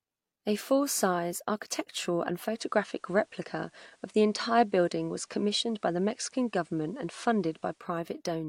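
Digital radio blending to analogue, 2.42 to 7.90 s: the receiver cross-faded to the FM broadcast, adding faint hiss.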